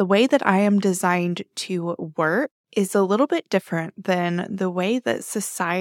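No technical faults can be heard anywhere in this speech recording. Nothing in the sound points to trouble in the chain that captured, processed or delivered it.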